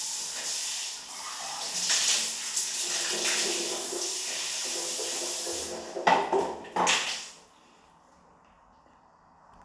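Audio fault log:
No technical faults can be heard anywhere in the audio, and nothing is added to it by the recording or transmission chain.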